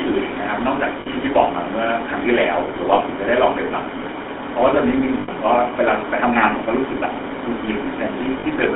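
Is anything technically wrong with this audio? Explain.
Yes. The speech has passed through the GSM full-rate codec for its entire length, and there are four short lost GSM frame events.

GSM full-rate codec, throughout: the codec models the vocal tract and excites it with a sparse, regularly spaced pulse train. That gives the voice a buzzy, gravelly roughness, and the damage is plainly audible. The audio sits in a telephone band of about 250 Hz to 3.5 kHz, which fits 13 kbps GSM. On a spectrogram, energy stops sharply near 3.5 kHz, the low end is thin, and the harmonics look smeared and grainy.

Lost GSM frames, at 1.0 s (60 ms), 2.94 s (40 ms), 5.2 s (80 ms) and 8.4 s (40 ms): where frames went missing, the decoder kept repeating the last good frame's settings. Each gap is heard as a brief rough, metallic ring in place of the normal sound. On the waveform, each one shows as a short stretch of repetitive cycles. 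On a spectrogram, it shows as a frozen, horizontally streaked patch.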